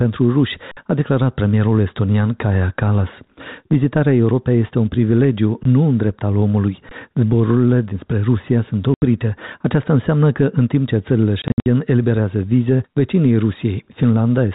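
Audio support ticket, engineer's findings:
Underrun with held sample at 0.71 s (54 ms, about 50 ms of audio lost), 5.63 s after "este un privilegiu" (21 ms), and 6.89 s after "un drept al omului" (21 ms). Output buffer starved. The converter freezes on its last value, giving a flat plateau with little click. The 21 ms gaps fit a 1024-sample buffer.

Packet loss filled with silence at 8.94 to 9.02 s (80 ms) and 11.42 to 11.66 s, between "în timp ce țările" and "eliberează vize vecinii" (160 ms lost in scattered holes across 240 ms, longest run 60 ms). Network/receiver path. Gaps drop to silence with hard edges, unlike the quiet held plateaus. Hole sizes point to 20 ms packets.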